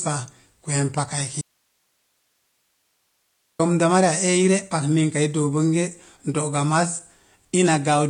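Across the whole recording the speech sounds dull and smeared, with a fizzy, warbling edge on sibilants and nothing at all above 9.8 kHz. This is plainly audible AAC compression, likely AAC-LC at a low bitrate, with the sound suggesting something near 32 kbps. To save bits, the encoder has cut the top of the spectrum away and coarsely quantised what remains, so fine detail smears into that watery texture.

Just after "pa kweem paka", at 1.42 s, the speech cuts off abruptly. For 2.18 s, until 3.59 s, nothing remains but faint hiss, roughly 50 dB below the speech level, before the sound snaps straight back. This is an audio dropout to a faint residue, likely caused by the wanted signal being lost upstream while the path after the break stayed live, so only its own noise floor came through. The hard edges at both ends set it apart from a natural pause or a fade.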